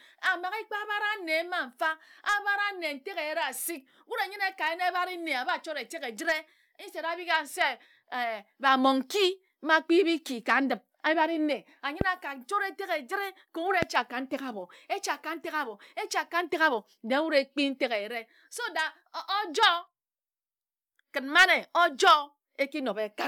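A loud pop lands at 12.01 to 12.03 s, about 20 dB above the speech, and a second at 13.83 to 13.85 s, about 15 dB above. Each is a single thump, likely from an electrical pulse such as a switch or static discharge. Unlike a dropout or clipping, the speech continues unbroken beneath it.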